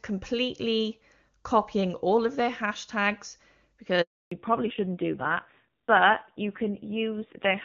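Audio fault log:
4.01–4.31 s, handover gap: the sound fades out within a few tens of milliseconds at 4.01 s and stays silent for 300 ms until 4.31 s. No speech frames reached the receiver while the call was passed from one network to another, so the decoder had nothing to play. Whatever was said in that stretch is simply gone rather than muffled or garbled, and the speech resumes only once the new link is carrying frames.
4.31–7.64 s, fallback to narrowband: right where the speech returns, everything above 4 kHz disappears and stays missing to the end. The call has dropped from HD Voice to an older narrowband codec. Before the gap, the wideband codec keeps the upper band with at most faint coding damage. After it, the speech is duller and rougher. That fits a move from AMR-WB at 23.85 kbit/s down to AMR-NB at its 5.9 kbit/s rate.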